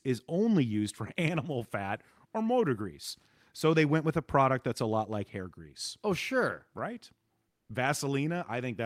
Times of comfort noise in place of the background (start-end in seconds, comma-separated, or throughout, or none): 7.48-7.69